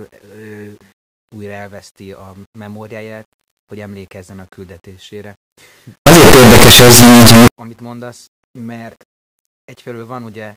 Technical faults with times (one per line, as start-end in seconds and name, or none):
6.06-7.48 signed and unsigned mixed up